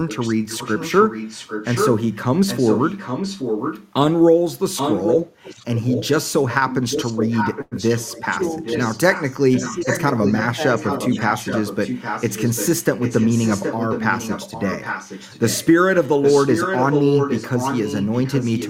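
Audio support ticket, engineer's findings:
Echo leak, 0.07–3.92 s and 4.76 s to end. Far end likely on loudspeaker with its echo canceller leaving residual mic pickup, returned to us. Delayed copy of the talker trails by 814 ms, only about 5 dB under the direct sound. Audible doubling; gap 3.92–4.76 s clean of it.

Call audio freeze, 7.61–7.74 s. Packets likely held in transit, jitter buffer ran dry. Receiver stretched the last sound into a brief fading buzz or hiss for about 0.1 s, then resumed where it stopped. Nothing lost, but playout now runs 101 ms later.

Speech suppressed in double talk, 8.23–8.64 s and 9.51–10.59 s. Echo canceller likely unable to separate local talker from loudspeaker echo while both sides spoke, so it attenuated everything. Talker dips about 10 dB in the first window, about 5 dB in the second, affected portions totalling roughly a tenth and two tenths of a second.

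Jitter buffer speed-up, 12.23–13.42 s. Buffer overfilled, receiver trimming pitch-period slices repeatedly to recover latency. Playback runs at 105% speed, pitch unchanged, roughly 70 ms cut out over the stretch. Sounds slightly hurried, rhythm tightened.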